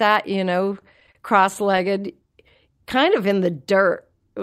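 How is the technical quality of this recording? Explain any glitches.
The recording has two timing glitches, both from the network receiver struggling to keep a steady flow of audio. No content is lost, but the speech drags in two places.

Repeated stalls (stutter) run from 0.73 to 1.80 s. Packets came in late or slower than playback, so the jitter buffer kept running dry. At each empty moment the receiver extended the last bit of sound to cover the wait. There are ten such stalls, the longest about 30 ms, adding roughly 128 ms of filler, about 12 percent of that stretch. Nothing is skipped, but the speech hiccups and drags in a choppy, stuttering way.

A jitter buffer slow-down follows from 2.96 to 3.89 s. Here the receiver deliberately built up a reserve by repeating single pitch periods and fragments of pauses many times over, adding about 66 ms. Playback runs at about 94 percent speed, so this passage sounds slightly stretched and drawn out while the pitch stays unchanged, with perhaps a faint warble on sustained sounds.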